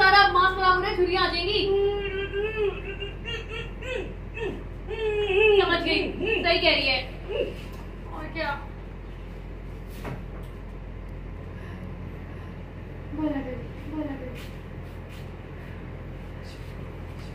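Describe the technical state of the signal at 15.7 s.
At 15.7 s a doubled audio track is present, running from 11.37 s to the end. A full-band second copy trails roughly 0.7 s behind, about 5 dB quieter, with no decay or room colour, likely from a second, slower capture path.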